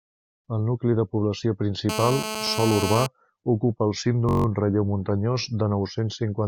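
From 1.89 to 3.07 s a GSM phone buzz sits over the speech, a hard, raspy tone about 6 dB below the signal. A nearby 2G phone on a call was transmitting in bursts about 217 times a second, and the audio circuitry demodulated those radio pulses, so the buzz holds nearly steady. On a spectrogram it shows as a dense comb of horizontal lines at 217 Hz and its multiples, running straight through the speech without following it.

At 4.29 to 4.46 s a system hang loop takes over. The computer or driver stalled while the sound hardware kept replaying the same 21.33 ms chunk, which fits a 1024-sample buffer, eight times in a row. Because the loop is short, it comes across as a brief, flat buzz at about 47 Hz. The waveform shows identical repeated segments, and the spectrogram shows harmonic lines spaced 46.9 Hz apart. Little or no audio appears to be lost around it.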